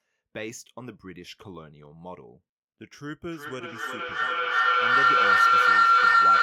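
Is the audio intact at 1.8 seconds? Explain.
Yes, the speech at 1.8 seconds is intact, with no dropout, click, distortion or other fault audible at that moment.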